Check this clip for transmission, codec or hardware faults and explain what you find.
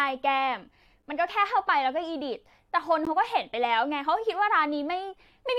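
Two short, hard-edged silences interrupt the speech, both caused by a gap between stream segments. At 1.02 s and 3.05 s, on the boundaries of segments about 1.0 s long, the timestamps leave 8.7 ms and then 14.4 ms uncovered, and the player fills each hole with silence. Unlike a packet dropout, no speech is lost: the sound resumes exactly where it stopped, just slightly late.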